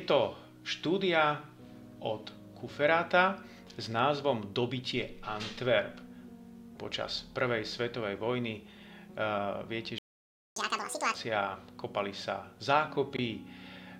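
A playback stall silences the audio from 9.98 to 10.56 s, about 0.58 s, most likely because the player ran dry of data or its thread was blocked. Catch-up at higher speed follows from 10.56 to 11.14 s: the backlog is resampled at 2.0x, so pitch jumps by roughly ten semitones until normal speed resumes.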